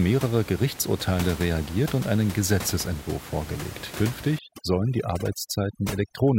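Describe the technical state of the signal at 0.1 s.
At 0.1 s the signal is intact, with only the room's own background noise audible, sitting about 14 dB below the speech.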